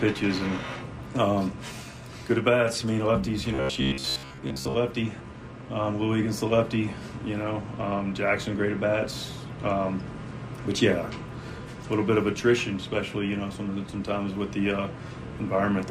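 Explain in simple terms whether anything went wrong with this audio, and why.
Something does go wrong, from 3.54 to 4.74 s: the sound turns into a flat, metallic drone. This is robotic sound from repeated short buffers, likely because fresh audio arrived too slowly and the player kept replaying its last sliver of sound, about 15 ms long, for most of that stretch. Those rapid repeats impose a steady buzz near 67 Hz. Unlike a dropout, nothing goes silent, and unlike a stutter, no recognisable chunk is heard repeating.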